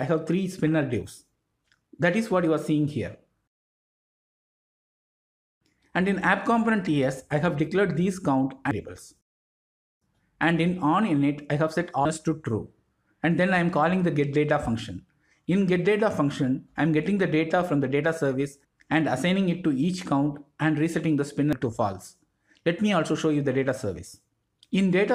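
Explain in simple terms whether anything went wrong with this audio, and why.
Three brief glitches, at 8.71, 12.05 and 21.53 seconds, come from damaged data in a compressed stream. At each point, a small piece of the compressed file got garbled, so the decoder couldn't make sense of it. It lost its place and had to hunt for the next clean chunk to pick up from. What you hear is a quick chirp or blip cutting into the sound at each spot.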